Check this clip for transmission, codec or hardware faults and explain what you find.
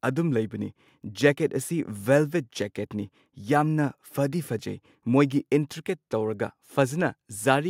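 Nothing wrong can be heard anywhere in the clip.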